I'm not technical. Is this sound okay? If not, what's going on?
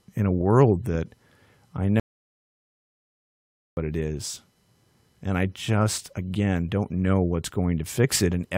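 No. At 2.00 seconds the sound cuts out completely, with no background at all. It comes back at 3.77 seconds. That is an audio dropout to silence, and about 1.8 seconds are lost. The likely cause is a brief loss of the input signal.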